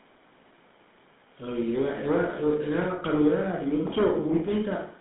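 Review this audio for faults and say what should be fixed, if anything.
GSM full-rate codec damage runs throughout the speech. Band is limited to roughly 150 Hz–3.7 kHz, fitting a 13 kbps pulse-excited coder. Voices sound buzzy and gravelly. Prevent it by routing through a wideband codec.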